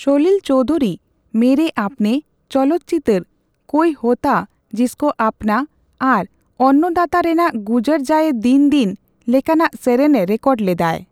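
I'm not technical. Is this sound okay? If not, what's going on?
No, not quite. There are two tiny, sharp clicks in the speech, one at 0.75 seconds, just before "ᱢᱮᱨᱮ ᱟᱯᱱᱮ", and another at 8.91 seconds. They sound like dropped samples, which is likely what happened: a handful of the tiny measurements that make up the recording went missing, far less than a thousandth of a second. Nothing you'd actually miss hearing is lost, but the sound jumps abruptly at that point, and that jump is the click.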